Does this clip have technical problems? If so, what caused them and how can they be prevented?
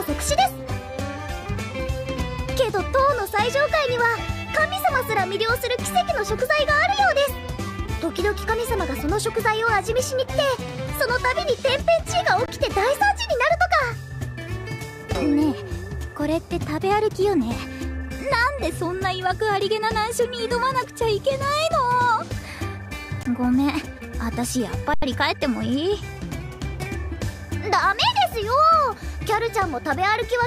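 Yes. Underruns with held sample occur at 12.46–12.48 s, 23.23–23.25 s (each about 21 ms, fitting a 1024-sample block) and 24.94–25.02 s (85 ms). The output buffer emptied, so the converter froze on its last value. The sound drops to a flat, static level, and playback resumes where it paused, so each gap ends softly rather than with a sharp click. Enlarging the output buffer and giving the audio thread higher scheduling priority would prevent it.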